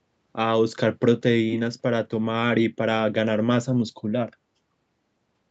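No faults found in this speech; it has passed through call microphone processing and a WebRTC call path, with nothing above 8 kHz.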